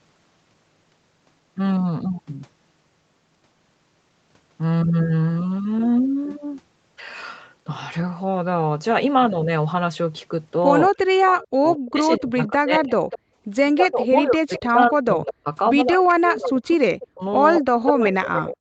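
From 10.95 to 12.96 s, and again from 13.74 s to the end, the speech dips by roughly 40 dB in pieces, likely speech suppressed in double talk as the canceller ducks both sides. Echo leak shows up at 12.44, 13.11, 14.54 to 15.32, 15.93 to 16.12 and 16.71 to 17.91 s: a faint copy trailing 199 ms behind, about 15 to 20 dB down, likely loudspeaker pickup that wasn't cancelled. Between 13.24 and 13.35 s the room sound drops by about 40 dB for roughly 100 ms, background gated by the echo canceller, then comes straight back.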